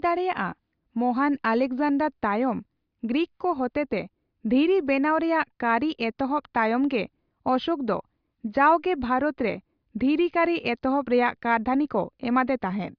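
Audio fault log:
Nothing stood out on listening through this speech recording.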